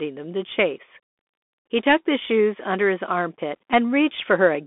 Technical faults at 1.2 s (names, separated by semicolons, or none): Bluetooth CVSD headset codec